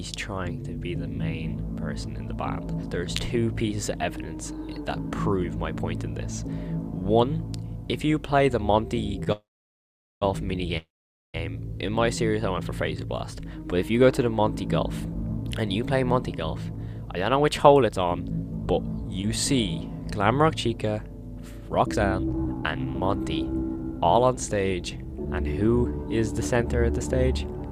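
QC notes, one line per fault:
9.24 to 9.28 s, short stall from a late packet: a packet was due but hadn't arrived, so the jitter buffer ran dry and the receiver held the last sound for 25 ms until it turned up, then carried on from the same point. Nothing is lost, and the delay grows by 25 ms. It differs from concealed loss in that the held sound is followed by everything that came next, with no piece skipped.
9.32 to 10.23 s and 10.77 to 11.36 s, call audio freeze: the audio is held and then drops out, 891 ms in the first case, of which 800 ms is silent, and 564 ms in the second, of which 490 ms is silent. The likely cause is packets held up in transit, leaving the jitter buffer empty until they arrive and playback resumes where it stopped. Unlike the short stall, the wait lasts long enough to fall to silence, and each freeze adds its full length to the delay, with nothing missing.
15.00 to 20.73 s and 21.79 to 25.99 s, jitter buffer speed-up: with more audio queued than it aims for, the receiver cut out many short pitch-period pieces in a row to bring the delay back down. 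The first run plays at 109% speed and removes roughly half a second. The second plays at 120% and removes about a second. Pitch stays the same throughout, so these passages sound hurried rather than higher, which sets this fault apart from a sped-up recording.
19.22 to 19.25 s, short concealed packet loss: inside the first speed-up, 20 ms of the call never reached the decoder, and the receiver bridged the gap by extending the preceding sound, from its pitch if voiced or as shaped noise if not, for 9 ms before blending back into the real audio. It comes across as a brief smear. Unlike a stall, a short piece of the original is actually gone rather than delayed.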